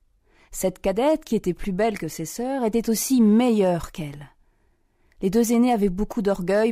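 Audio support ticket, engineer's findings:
Brief crackle on peaks, 3.20 to 3.69 s. Hard clipping: level runs about 1 dB past what a stage can pass, likely converter input or fixed-point gain stage, so peaks are cut flat, adding high harmonics. Small overload, so crackle rather than fuzz.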